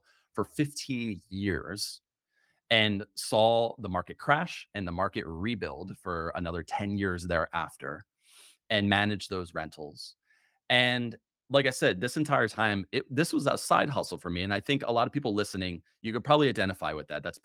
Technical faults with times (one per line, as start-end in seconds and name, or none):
none